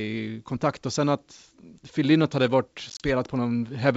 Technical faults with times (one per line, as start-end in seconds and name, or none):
2.90-3.05 packet loss on an ADPCM call